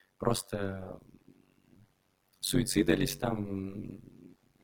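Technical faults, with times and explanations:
Throughout, overlap-add ripple: the sound carries a fast, buzzy flutter, a rough robotic tremolo running at around a hundred times per second. The audio was split into windowed frames and rejoined with an overlap whose windows do not add up to a steady gain, so the level dips once per frame. Here the dips are extremely deep, about 60 dB, which turns the flutter into a harsh chopping quality rather than a gentle wobble.
1.02–1.85 s and 4.02–4.64 s, speech cut by the noise suppressor: in both stretches parts of the speech go faint and swallowed, with soft sounds and endings sinking toward the background. The suppressor misread some of the speech as noise and turned it down together with the room noise, which itself sits about 28 dB below the speech. The deepest drops reach about 18 dB in the first stretch and about 19 dB in the second, affecting roughly 0.4 s and 0.3 s of sound respectively.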